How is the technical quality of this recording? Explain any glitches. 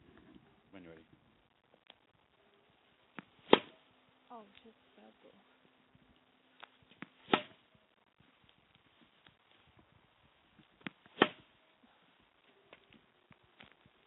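No glitches turn up anywhere in these everyday sounds, which arrive through a WebRTC call path using G.711 A-law at 64 kbps, so the top end stops at 4 kHz.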